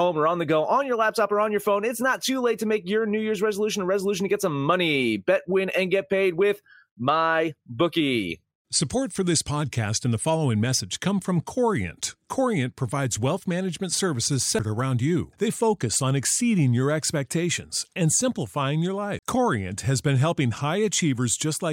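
CD skip at 14.59 s and again from 19.19 to 19.23 s: each time the player's laser lost its track and landed on another turn of the disc's spiral. Playback mutes very briefly, just a few milliseconds the first time and about 40 ms the second, then resumes from a different point in the speech. Each is heard as a tick or short gap followed by an abrupt jump in the speech.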